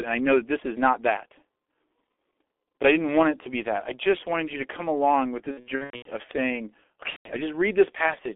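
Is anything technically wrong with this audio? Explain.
Yes, there are two faults.

G.723.1 codec, throughout: the speech was coded at about 6.3 kbit/s in 30 ms frames, within a line band of roughly 250 Hz to 3.5 kHz. The coder updates its model of the voice only once per frame, so quick changes are smeared. The damage is heavy. Speech sounds muffled and hoarse, with nothing above 3.5 kHz, little low end, and consonants blurred together.

VoIP packet loss concealed by the speech codec, from 5.51 to 6.10 s (right after "to come along with") and from 7.10 to 7.31 s: packets went missing, and the decoder filled the gaps by repeating its last pitch and filter while lowering the gain. The first event loses about 360 ms of audio in scattered gaps across roughly 540 ms. The longest gap is 90 ms, which is enough to reach the point where G.723.1 mutes. The second event loses about 150 ms. In both places the speech turns into a fading buzzy tone or coloured noise. 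It stays weak or distorted for a short while after packets resume, because each frame depends on the one before.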